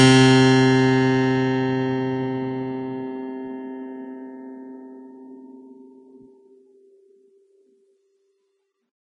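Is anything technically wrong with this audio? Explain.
Yes. Throughout the music there is plainly audible damage that sounds like Vorbis compression, likely at a low setting around 27 kbps. Nothing remains above 10.6 kHz. Treble detail is quantised so coarsely that it turns into noise. The result is hissy, grainy treble, roughened tones and blurred attacks.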